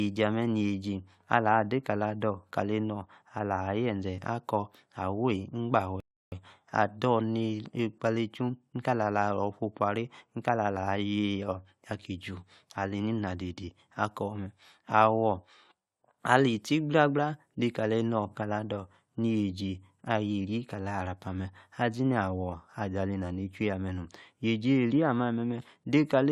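A rebuffering stall interrupts this speech clip at 6.00 s: the player exhausted its downloaded audio and paused until more data arrived. The sound drops to silence for about 0.32 s, then resumes exactly where it left off, losing nothing but adding that gap.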